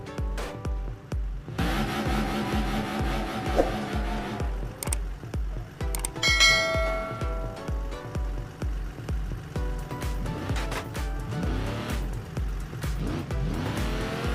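Nothing goes wrong anywhere in this one; there's no technical fault to point to at any moment in the audio.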